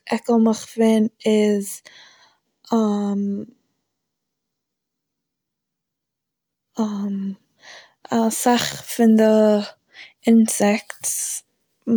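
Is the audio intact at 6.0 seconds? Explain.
No. At 6.0 seconds the audio carries clock slip clicks, which run from 0.10 s to the end of the clip. The likely cause is two devices running on unsynchronised clocks that differ by roughly 700 parts per million, so a single sample is dropped or repeated about every 30 ms. Those slips come fast enough to form a faint, steady rattle under the speech, clearest on louder sustained sounds and gone in pauses.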